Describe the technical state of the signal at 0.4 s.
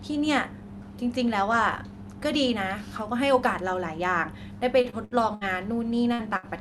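At 0.4 s the speech signal is intact, with no dropout, glitch or other fault at that moment, only the ordinary coding of the call path it passed through.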